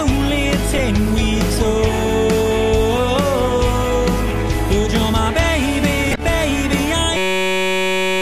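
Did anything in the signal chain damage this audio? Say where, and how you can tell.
Yes. Corrupt frame decoded, at 0.71 to 0.80 s and again at 6.11 to 6.24 s, points to the codec stage. Each event is a short chirpy burst spanning a few frames: damaged compressed data decoded anyway, with misread gains and codes putting energy at wrong frequencies.

System hang loop, from 7.17 s to the end, points to the driver or buffer stage. A 5.33 ms slice repeats exactly, giving a steady buzz at 188 Hz. That fits a 256-sample ring buffer cycling while the system froze, and about a second of audio is lost.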